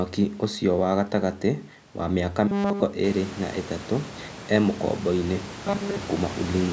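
At 2.47 to 2.83 s, right after "wa mĩ aka", and again at 5.46 to 5.96 s, after "ĩ tatũ e mũkomboinĩ", you get robotic sound from repeated short buffers. It's a stiff metallic 200 Hz buzz, likely from a 5 ms chunk looping while fresh audio stalled.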